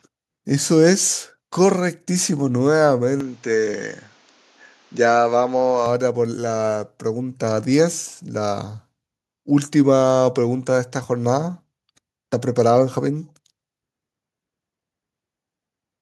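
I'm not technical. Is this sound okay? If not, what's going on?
No. From 3.20 to 5.86 s the speech turns duller, with faint new background noise, likely an input switched to a poorer device.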